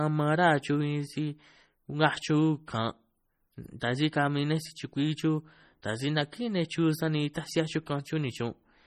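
Speech that has likely been through heavy MP3 compression at a low bitrate, consistent with about 32 kbps, for its whole length. With bits this scarce the encoder drops weak frequency components frame by frame, leaving the sound watery and swirly, with chirpy s sounds and smeared onsets.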